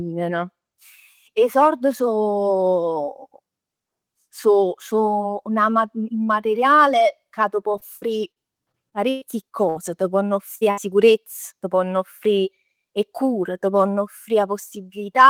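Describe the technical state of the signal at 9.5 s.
Repeated packet loss (robotic sound) runs from 7.71 to 9.77 s, covering the 9.5 s mark. Nine short dropouts, the longest 117 ms, are each patched by stretching the preceding sound, concealing about 17% of the span and leaving choppy speech with fragments missing.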